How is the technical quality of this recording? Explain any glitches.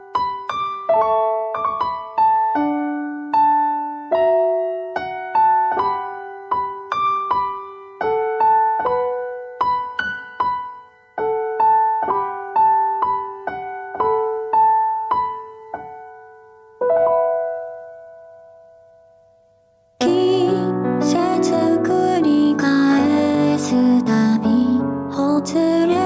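The recording has one problem, present for its whole length: gain pumping. The input gain is likely set far too high, so a fast limiter clamps down on every loud sound. The gain swings by around 10 dB, leaving the sound squashed and breathing. The call's microphone processing is audible in the missing top end, with nothing above 8 kHz.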